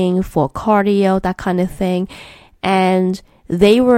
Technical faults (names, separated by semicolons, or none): hard clipping